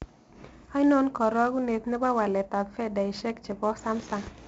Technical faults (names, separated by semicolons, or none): 4-bit ADPCM compression